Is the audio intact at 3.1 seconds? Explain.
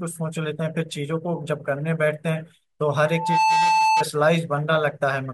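No. At 3.1 seconds the clip is caught in loudspeaker feedback squeal, running from 3.04 to 4.06 s. A microphone is picking up the loudspeaker it drives, and at 878 Hz the loop gain passes unity, so that frequency keeps recirculating and growing. The result is a single steady tone that swells in under half a second to a piercing squeal, sitting roughly 5 dB louder than the speech around it until it stops.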